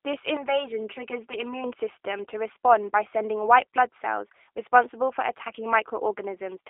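A speech recording carrying G.729 codec damage from start to finish. The voice has been rebuilt from a vocal tract filter, a pitch predictor and a few sparse pulses per frame, so it comes across as plainly rough and synthetic, which fits an 8 kbit/s G.729A stream. On a spectrogram, energy stops dead at a flat ceiling near 3.8 kHz and is thin below 300 Hz, leaving a narrow telephone band of roughly 300 Hz to 3.6 kHz.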